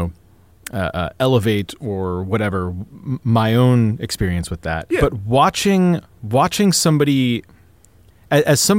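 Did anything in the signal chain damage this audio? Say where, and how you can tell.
No, no signal-chain damage heard.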